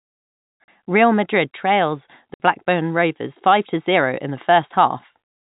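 Packet loss filled with silence cuts the speech at 0.64 s for 40 ms and at 2.34 s for 60 ms. Both gaps have hard edges, and their lengths fit 20 ms packets.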